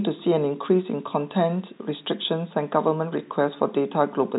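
No technical faults are audible.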